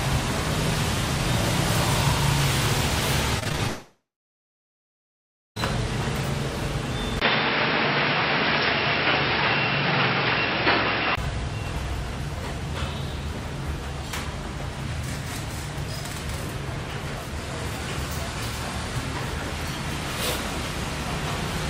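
From 3.39 to 3.61 s there is repeated packet loss with a robotic sound. Five short gaps, the longest 36 ms, are each patched by stretching the preceding sound. Nearly half of that span is synthetic fill, so the audio turns choppy and robotic.

At 3.67 s the audio cuts out until 5.58 s, a gap of about 1.9 s, most likely a long network dropout. A brief decaying buzz continues the last sound, then roughly 1.5 s of silence follows before the audio resumes with that stretch missing.

At 7.20 s, after a 20 ms silence, the sound becomes dull and narrow. Nothing remains above 5.5 kHz, the level shifts by around 5 dB, and a new noise floor sits roughly 30 dB under the signal. The cause is likely an input switched to a poorer device, and the sound stays this way until 11.17 s.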